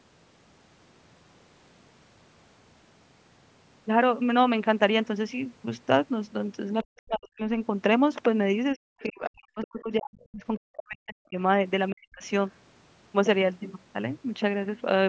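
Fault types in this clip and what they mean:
Speech suppressed in double talk: The talker's speech drops sharply, by roughly 40 dB at its deepest, in three places. The longest stretch runs from 8.74 to 11.37 s. Another speaker talking at once likely confused the echo canceller, so it muted the wanted speech along with the echo.
Other side's voice leaking through: A faint scrap of a second voice appears briefly at 9.01 to 9.09 s, about 30 dB below the speech. It likely comes from the far end's loudspeaker sound not being fully cancelled at the microphone.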